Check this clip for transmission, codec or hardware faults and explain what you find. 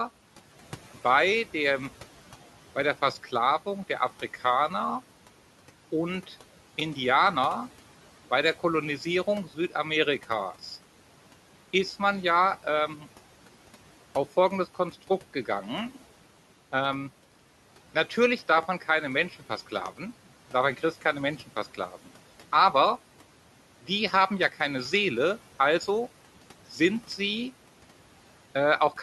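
Two faults can be heard: three loud pops in two events, and a stretch of speech cut by the noise suppressor.

The loud pops come as a double pop from 18.58 to 18.65 s and a single pop from 19.86 to 19.88 s, each peaking roughly 10 dB above the speech. They are most likely voltage steps from a plug, switch, static or driver glitch entering the chain, shaped by the circuits after them into sharp thumps. The speech carries on unbroken underneath, which sets these apart from dropouts or clipping.

The speech cut by the noise suppressor falls between 21.74 and 22.08 s. The suppressor mistook quiet parts of the speech for background and pulled them down by as much as about 9 dB, for about a tenth of a second in total within that span. Those sounds come across swallowed and faint. Unlike a dropout, the sound thins rather than vanishing, and the room noise, sitting about 21 dB below the speech, dips along with it.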